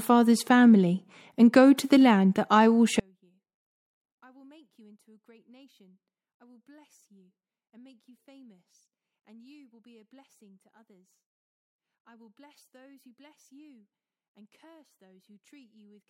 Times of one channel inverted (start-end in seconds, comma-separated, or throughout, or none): 3.00-16.09